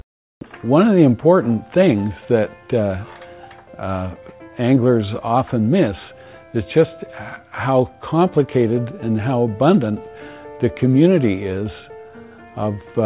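No technical faults can be heard anywhere in this audio. There is nothing here that calls for a time stamp or a diagnosis.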